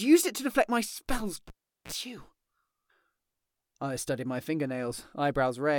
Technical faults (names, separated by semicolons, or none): cable pulled and plugged in